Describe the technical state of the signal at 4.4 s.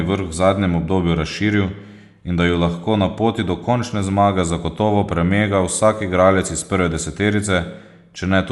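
At 4.4 s the speech carries damage from Dolby Digital compression that runs through the whole clip, likely a low-bitrate encode around 64 kbps. Nothing survives above about 11.4 kHz, so it sounds dull, and bands left without bits are filled with noise that gives a rough flutter. A spectrogram shows a flat ceiling at that frequency, with speckled noise patches between harmonics.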